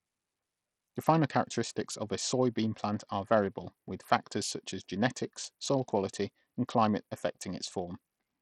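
From start to finish, the speech carries heavy codec damage. The likely cause is Bluetooth SBC compression at a low setting, which fits a bitrate near 64 kbps. SBC splits the signal into a few wide frequency bands and shares out bits without any model of hearing. Here the upper bands are starved. The treble fades and flickers in and out. The remaining bands are coarsely quantised, so a gritty noise and aliasing ride on the speech.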